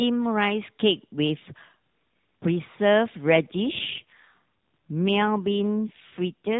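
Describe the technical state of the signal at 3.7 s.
At 3.7 s you're inside an AMR rate drop that kicks in around 3.22 s and runs to the end of the clip. The network has pushed the codec down to a lower mode so it can spend bits on error protection; the roughness fits a step from 12.2 down to 5.9 kbps. The speech stays in the same narrowband AMR range with no gaps, but it sounds buzzier and more synthetic than before the switch.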